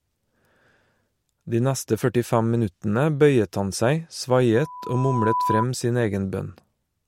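A microphone-to-loudspeaker loop exceeded unity gain. After "minuttene bøyet han seg", a loudspeaker feedback squeal at 995 Hz swells to roughly speech level from 4.54 to 5.66 s.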